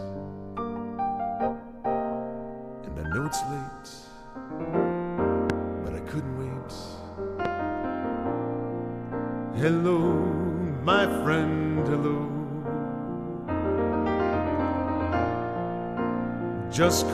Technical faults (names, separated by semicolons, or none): loud pop